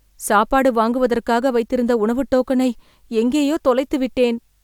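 No technical faults can be heard anywhere in the speech. Nothing in the sound points to trouble in the recording or playback chain.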